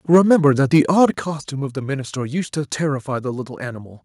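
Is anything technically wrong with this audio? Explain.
Yes, there are two problems. From 0.13 to 0.47 s and again from 0.73 to 1.05 s there's microphone overload: the peaks run about 3 dB past the converter's ceiling, likely from input gain set too high, so a small percentage of samples get their tops flattened, putting a harsh, crackly edge on the loudest syllables.

There's also the microphone volume stepping down, at 0.15 s by about 2 dB and at 1.14 s by about 5 dB. It's likely the call software reacting to that clipping by lowering the input level, so the speech and background suddenly drop in loudness.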